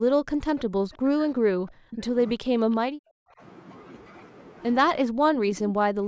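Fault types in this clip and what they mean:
Speech suppressed in double talk: The speech sinks sharply, by as much as about 40 dB, in three stretches: 0 to 2.17 s, 2.34 to 3.41 s and 5.03 to 6.07 s. This is likely an echo canceller turning the talker down while the other side also spoke.
Echo leak: Two faint scraps of repeated speech appear, at 0.58 to 0.63 s and 2.71 to 2.76 s. Each trails the original by 338 ms. They sit about 25 and 35 dB below the speech. This is likely loudspeaker sound the echo canceller failed to remove.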